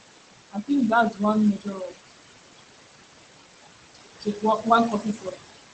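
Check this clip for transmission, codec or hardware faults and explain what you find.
Two processing faults show up, both from the noise suppressor.

Noise suppressor artifacts run through the whole clip. The suppressor pulls steady-noise bands down by about 19 dB frame by frame, so the room noise, only about 8 dB under the speech, dips between phrases and returns under them.

Speech cut by the noise suppressor occurs at 0.51–0.70 s, 1.10–1.21 s, 1.57–1.98 s, 4.20–4.43 s and 4.92–5.41 s. The suppressor misjudged quiet speech as noise and attenuated it by about 13 to 21 dB, deepest at 0.51–0.70 s. Those stretches sound swallowed and faint. The band-limited top end, near 8 kHz, fits an Opus call path at around 20 kbps.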